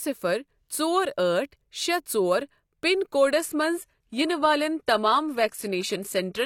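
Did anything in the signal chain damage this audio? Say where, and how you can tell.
Yes. An adaptive stream at a lower bitrate takes over from 3.36 s to the end of the clip. This is a network and codec fault. At that instant the speech quality drops abruptly with no gap. Content above 14.9 kHz is gone, and codec artefacts rise. The connection slowed, and the player switched to a cheaper encoding, which fits a move from roughly 96 kbit/s AAC-LC to 24 kbit/s HE-AAC.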